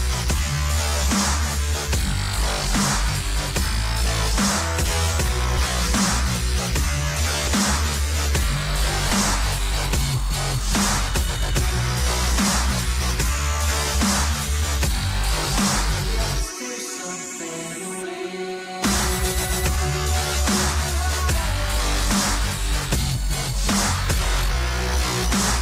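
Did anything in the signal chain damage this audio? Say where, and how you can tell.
Yes, compressed frames skipped, at the codec or storage stage. At 5.57–5.60 s, 7.47–7.50 s and 9.09 s the sound jumps ahead by a few tens of milliseconds. The jumps fit whole 10 ms frames lost or rejected by the decoder.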